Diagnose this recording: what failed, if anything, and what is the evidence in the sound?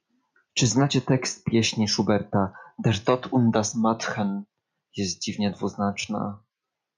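Nothing in the recording stood out as a fault on listening.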